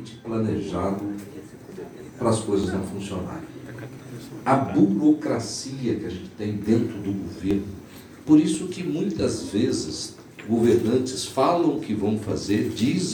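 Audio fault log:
2.64, 3.98, 7.51, 8.55, 11.78 s: dropped buffer (overrun), likely. Samples were overwritten before being read, so short stretches vanish (roughly 5 ms at 2.64 and 11.78 s, 10 ms at 8.55 s, 20 ms at 3.98 and 7.51 s). Each splice joins the two sides directly, producing a small forward jump with no gap.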